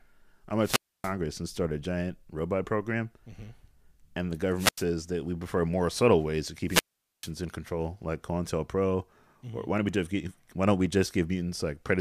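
Wireless microphone squelch dropouts occur three times in this speech: 0.61 to 1.14 s, 4.57 to 4.85 s, and 6.67 to 7.31 s. Each time the analogue FM radio link weakens, hiss briefly swells, and the receiver's squelch then mutes the output, leaving near silence for about 0.28 s, 0.09 s, and a long 0.44 s respectively, before the signal recovers and the voice comes back.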